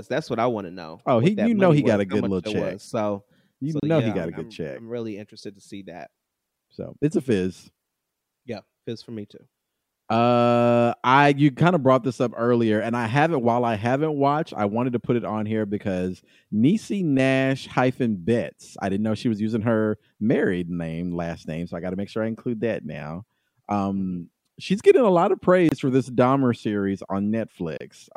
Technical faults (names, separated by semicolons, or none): gap at a join of encoded pieces